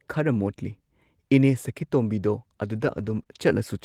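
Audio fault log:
2.75–3.21 s, lost packet rebuilt from error correction: twelve separate lost packets were replaced by the low-bitrate backup copies carried in the following packets, about 240 ms of rebuilt audio in all. Nothing drops out. The speech simply turns rougher and noisier, which sets it apart from concealment's smeared guesswork.
3.23–3.27 s, short concealed packet loss: about 20 ms never arrived and no backup copy existed, so the decoder extended the preceding sound and blended back in. The result is a brief smear or wobble, much shorter than the coarse stretch just before it.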